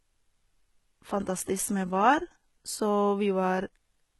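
From start to finish, the speech has a gritty, metallic sheen in the treble, and the s sounds come out lispy rather than crisp. Nothing reaches above about 11.8 kHz. The likely cause is HE-AAC compression with heavy damage, at a bitrate that fits roughly 16 kbps. The codec keeps only the lower spectrum and rebuilds the top by copying lower bands upward, so the treble's harmonics no longer line up with the voice beneath.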